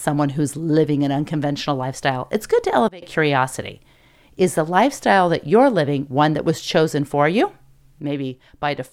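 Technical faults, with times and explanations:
2.88–3.02 s and 8.00 s to the end, sudden gain jump: right after "lifestyle it's good to" the level drops by about 21 dB, and after "was chosen for you" by about 6 dB. The background noise falls with the sound, likely from an unramped digital gain change. The waveform envelope steps down abruptly, and the spectrogram dims evenly across all frequencies.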